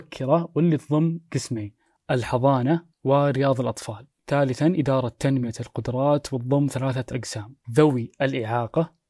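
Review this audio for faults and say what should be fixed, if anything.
No faults found in this speech recording; nothing needs fixing.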